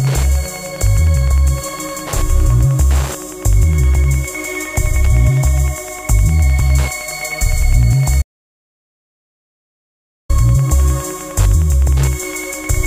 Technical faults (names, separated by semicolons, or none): Wi-Fi interference; audio dropout to silence